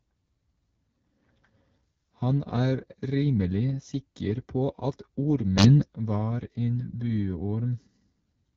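An AMR wideband (HD Voice) codec running at one of its lowest rates, consistent with about 8.85 kbit/s, has coded this speech, leaving it rough and raspy with nothing above 7.5 kHz. From 5.57 to 5.85 s a sudden gain jump lifts speech and background together by about 10 dB, likely from a level change applied without any ramp.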